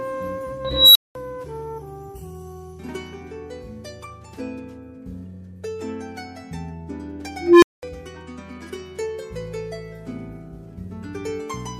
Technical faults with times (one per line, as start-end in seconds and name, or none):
0.65-1.15 unstable filter
7.41-7.83 unstable filter